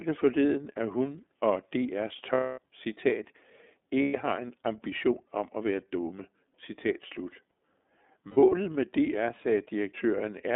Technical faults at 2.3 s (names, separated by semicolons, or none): iLBC codec; lost iLBC frames